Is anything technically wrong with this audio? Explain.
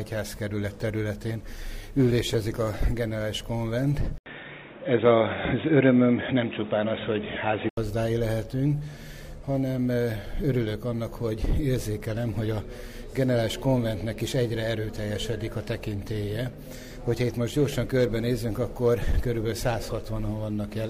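Yes. From 4.18 s to 7.77 s the sound abruptly turns dull and boxy, with nothing above 3.8 kHz, a level shift of roughly 5 dB, and a new background hiss well below the signal. An 80 ms gap of silence comes at the switch. This is likely an input switched to a poorer device: the recording jumped to another microphone or a headset call profile with a narrower band and its own noise, then clear sound returns.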